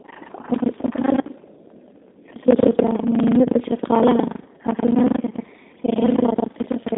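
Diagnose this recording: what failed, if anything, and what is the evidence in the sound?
Buffer tearing at the driver or buffer stage. A rattling 25 Hz buzz runs throughout. Part of each period, roughly 40 percent, replays audio about a tenth of a second old. This fits a 40 ms period.

G.729 codec damage. The line passes only 150 Hz to 3.7 kHz. The speech sounds plainly rough and synthetic, as expected from this 8 kbit/s model-based coder.

VoIP packet loss concealed by the speech codec, at the network stage. Brief fading smears occur at 1.22 to 1.25 s and 3.43 to 3.48 s, before "shaqaalaha caafimaadka". Each gap covers about 20 ms, consistent with a single lost packet.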